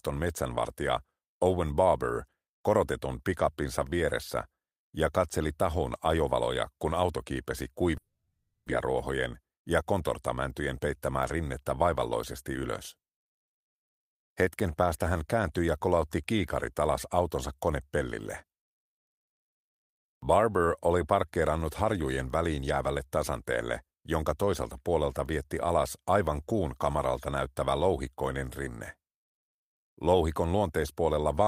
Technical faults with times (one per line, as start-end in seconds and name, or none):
7.97-8.72 long network dropout
9.42-10.00 jitter buffer speed-up
11.57 dropped samples